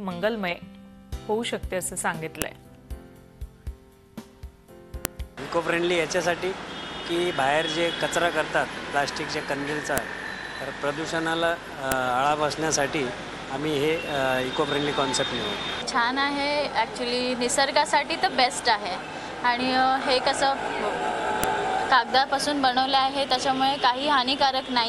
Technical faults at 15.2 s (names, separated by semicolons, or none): none